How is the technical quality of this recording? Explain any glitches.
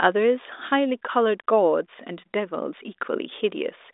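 No glitches or faults heard.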